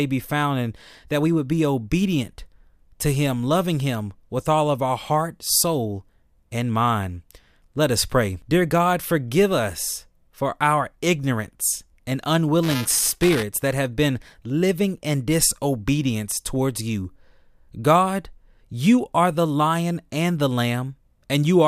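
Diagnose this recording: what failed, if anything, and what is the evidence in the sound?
Buffer tearing at the driver/buffer stage: after "for our ignorance and", 12.63 to 13.43 s, a 375 Hz rattle fits 128-sample buffers each splicing in slightly stale audio.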